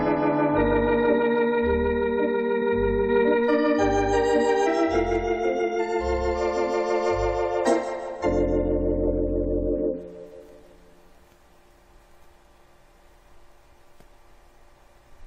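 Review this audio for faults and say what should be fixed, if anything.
No faults; nothing needs fixing.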